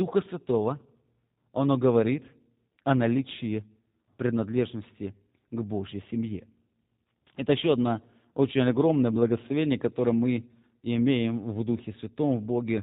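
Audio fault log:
throughout G.729 codec: the speech passed through a low-rate speech codec that rebuilds each 10 ms frame from a vocal tract model, a pitch predictor and a few pulses, which fits G.729 at 8 kbit/s. Nothing above 4 kHz survives, so the speech sounds muffled, rough and synthetic.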